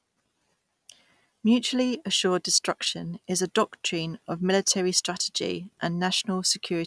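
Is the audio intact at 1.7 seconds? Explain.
Yes, the speech is intact at 1.7 seconds, with no dropout, click, distortion or other fault at that moment.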